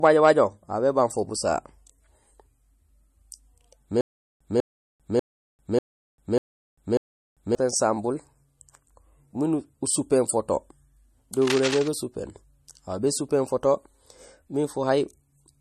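Throughout the speech there is MP3 compression damage that is plainly audible. Nothing is present above 12.6 kHz, and weak spectral detail flickers between frames, giving a watery, swirly texture and smeared consonants. This likely comes from an encoder starved of bits, which fits a rate around 40 kbps.

From 4.01 s to 7.55 s there is stutter with silent gaps. A 197 ms fragment repeats six times, each followed by about 396 ms of digital silence, so a burst returns every 592 ms. The audio due in that span is missing. This is likely a stalled player replaying its last buffer on each retry.

From 11.42 s to 11.88 s, cable scratch noise sits over the speech as dense, irregular scratching and rustling, roughly 10 dB below the signal. It likely comes from a worn cable, connector or control being moved, with its contact resistance fluctuating rapidly.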